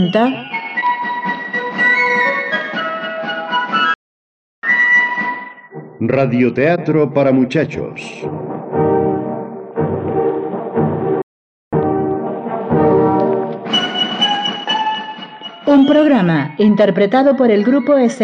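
The sound cuts to silence in mid-flow from 3.94 to 4.63 s (about 0.69 s) and again from 11.22 to 11.73 s (about 0.51 s), then resumes. These are playback stalls, likely from the player running out of buffered data or its thread being blocked.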